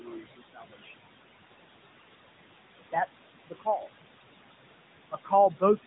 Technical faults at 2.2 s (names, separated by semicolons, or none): noise suppressor artifacts; AMR narrowband mobile codec